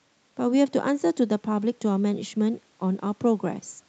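Nothing in this speech goes wrong, and the top end stopping around 8 kHz is just the call microphone processing and the Opus call path doing their normal job.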